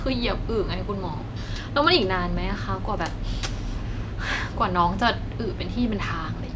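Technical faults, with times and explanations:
No technical faults detected.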